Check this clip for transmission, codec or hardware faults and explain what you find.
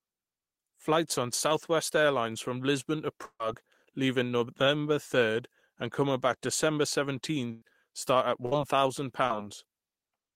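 The clip shows transmission faults: three bursts of packet loss and one short concealed packet loss in the speech. No codec or hardware faults stand out.

Burst of packet loss at 3.25 to 3.41 s, 7.51 to 7.64 s and 8.46 to 8.53 s. Roughly 140, 100 and 60 ms went missing, and the receiver stretched and faded the last sound across each gap. This gives a held buzz or fading hiss, with a brief silence in the first gap before the speech resumes later.

Short concealed packet loss at 9.27 to 9.32 s. About 20 ms was synthesized from the preceding sound and blended back in, heard as a brief smear or wobble.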